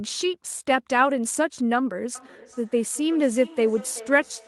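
A speech clip in which, from 2.15 s to the end, each phrase comes back as a faint repeat roughly every 0.4 s, peaking about 19 dB below the speech. This is feedback echo between two devices: one microphone recaptures another device's playback, which its own echo canceller cannot remove.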